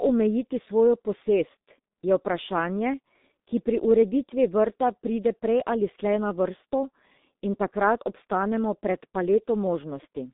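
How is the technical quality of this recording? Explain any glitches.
Technical quality is poor throughout because of heavy low-bitrate codec damage. The G.723.1 codec is present for the whole clip. Its 30 ms frames update the speech model sluggishly, and the sound fits a rate of about 6.3 kbit/s. The band runs from 200 Hz to 3.7 kHz with nothing above 3.8 kHz, so the speech sounds muffled and hoarse, with smeared consonants.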